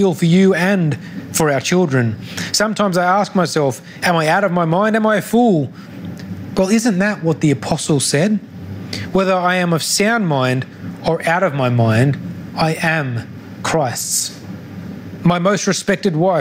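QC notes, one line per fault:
Throughout, gain pumping: the input gain is likely set far too high, with a fast limiter clamping it on every loud burst. The gain swings by around 20 dB, so levels sound flattened and squashed.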